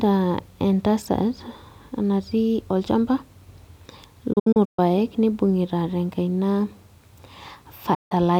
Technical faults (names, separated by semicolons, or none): digital broadcast dropout